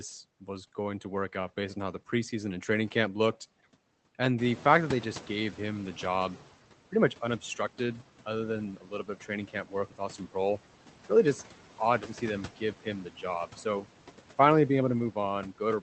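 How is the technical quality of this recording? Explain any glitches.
The recording has three noise-suppression problems, and the speech reaches us through a call codec whose sound is limited to about 8 kHz, consistent with a low-bitrate Opus stream.

Noise suppressor artifacts run through the whole clip. The suppressor lowers each frequency band it judges to be steady noise, frame by frame, here by about 11 dB. The band gains keep shifting between frames. The leftover background therefore dips in the gaps and swells back under the speech.

The noise suppressor is catching up from 4.38 s to 6.49 s. The room noise jumps by about 13 dB at around four and a half seconds. The suppressor's noise estimate lags that jump. The louder background comes through with less reduction at first. It then sinks as the estimate adapts over about 2.1 seconds, to a cut of about 9 dB. You hear a sudden surge of background that slowly fades down.

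Speech is cut by the noise suppressor between 8.77 s and 9.29 s. Here the suppressor mistakes part of the speech for noise. It turns that material down along with the background, by up to about 9 dB. Roughly a fifth of a second in total is affected. The affected speech in that stretch sounds swallowed or faint.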